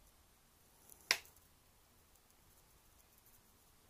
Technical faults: drift correction step

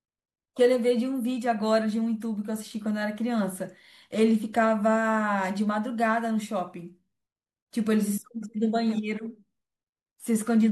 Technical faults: none

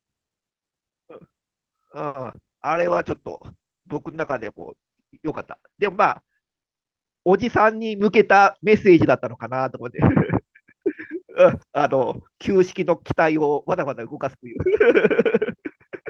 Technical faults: short stall from a late packet; short concealed packet loss; call bitrate drop; jitter buffer speed-up

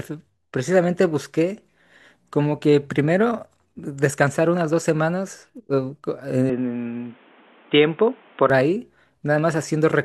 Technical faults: input switched to a poorer device

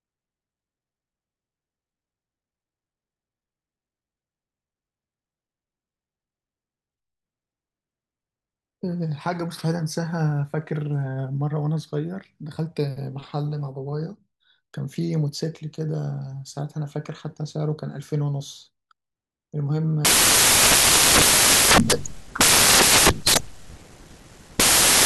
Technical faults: samples built from the wrong bytes

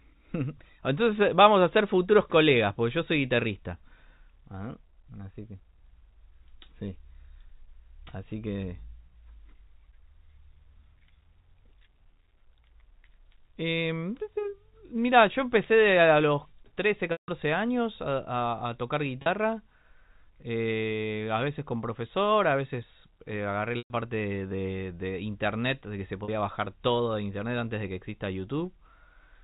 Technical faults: packet loss with pitch repetition

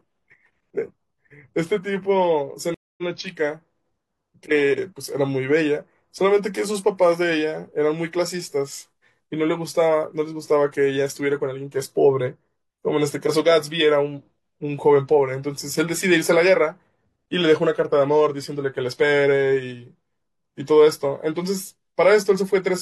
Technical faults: stream reconnect

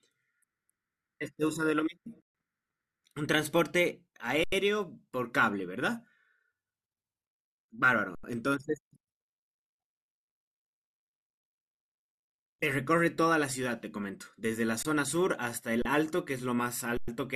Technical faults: underrun with held sample

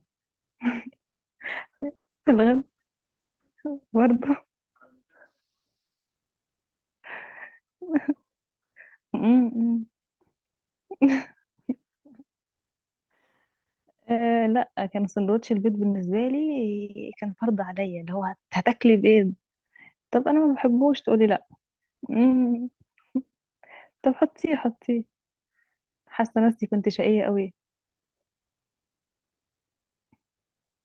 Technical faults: call audio freeze; skip ahead; jitter buffer slow-down; call bitrate drop; burst of packet loss; jitter buffer speed-up

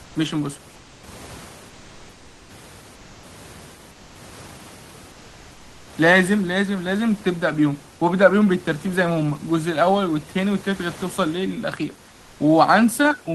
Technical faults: comfort noise in place of the background

